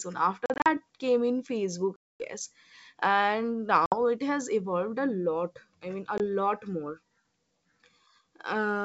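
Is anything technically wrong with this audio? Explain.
Yes. The speech suffers packet loss on an ADPCM call, with four dropouts. From 0.46 to 0.78 s about 120 ms of audio is lost in short gaps scattered over 200 ms, the longest 40 ms. From 1.97 to 2.23 s, after "came in facebook", 240 ms drops out. From 3.86 to 3.99 s, before "it has evolved a", 60 ms goes. At 6.18 s, after "lot i mean a", a single 20 ms gap appears. Each gap is hard-edged silence. The decoder's predictor and step size lose track of the sender's, so speech resumes slightly distorted, at times with a click or at the wrong level. It settles within tens of milliseconds. The G.722 wideband coding at 64 kbit/s is clear up to 7 kHz, with at most a faint hiss.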